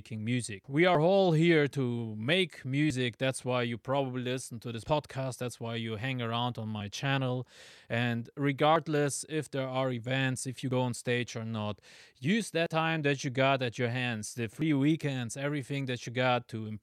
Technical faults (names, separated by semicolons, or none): audio missing between chunks